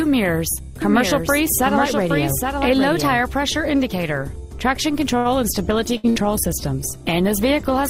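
Doubled audio track, from 0.82 to 3.34 s: a second full-band copy of the sound runs roughly 0.7 s behind the first, about 5 dB quieter, with no decay or room colour. It likely comes from a slower second capture path, and it starts and stops abruptly.

Short stall from a late packet, at 5.17 to 5.28 s: a packet arrived late and the jitter buffer ran dry, so the receiver held the last sound for 74 ms before resuming from the same point. Nothing is lost, but the sound hangs audibly with a slight buzz or dip.

Call bitrate drop, from 5.59 s to the end: the bandwidth estimate fell and the encoder went from 64 to 20 kbps, holding the lower rate for the rest of the clip. The coarser coding and reduced high-frequency content make the sound rough and muffled.

Burst of packet loss, at 5.97 to 6.06 s and again at 6.09 to 6.18 s: each time about 60 ms of audio went missing. The receiver stretched the preceding sound and faded it out, then jumped ahead, leaving two brief fading fills with small skips after them.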